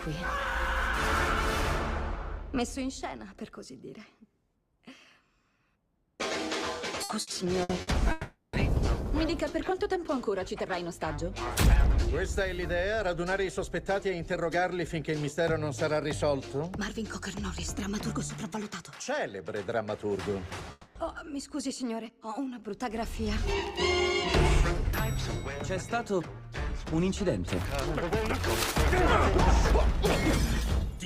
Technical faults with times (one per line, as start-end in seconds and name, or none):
7.03-7.90 repeated packet loss (robotic sound)
8.11-8.56 long network dropout
20.71-20.98 long network dropout